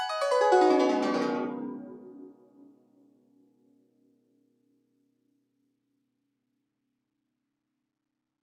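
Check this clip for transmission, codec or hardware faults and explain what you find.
The music has passed through a speech noise suppressor, which harms it across the whole clip and most heavily in one stretch.

A noise suppressor was applied to music for the full length of the clip. The processor is built to keep speech and remove steady background. It treats sustained tones, ambience and reverb as noise. Its gain keeps moving, with a swing of roughly 20 dB. Attacks pass through. Held sounds and tails are pulled down. The music pumps and flutters and sounds thinner than it should.

From 2.33 to 6.02 s, sound is cut by the noise suppressor harder than elsewhere. The processor classed this material as noise and attenuated it. The deepest drop is about 8 dB. About three seconds in total are affected. Sustained parts sink in level and decays end early. Sharp onsets still come through. The passage sounds thin and clipped at the tails.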